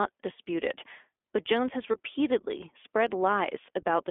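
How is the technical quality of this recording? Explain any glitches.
The recording is narrowband, band-limited speech with audible codec roughness throughout and one brief dropout near the two-second mark.

iLBC codec: Across the whole clip the sound sits in a telephone band of roughly 300 Hz to 3.5 kHz, with nothing above that. The roughness fits iLBC's 15.2 kbps mode, which codes each 20 ms frame's excitation independently of the frame before. That coarse, frame-by-frame modelling leaves the speech intelligible but plainly rough and slightly synthetic, with a thin, boxy quality from the missing highs.

Lost iLBC frames: From 1.92 to 1.96 s the audio briefly turns into a short held, faintly buzzy sustain. The length fits a single lost 20 ms frame. The decoder covered the gap by repeating the last pitch cycle blended with noise. Because iLBC frames do not depend on their predecessors, normal speech returns almost immediately afterwards, so the glitch registers as a tiny smeared blip rather than a silence or a click.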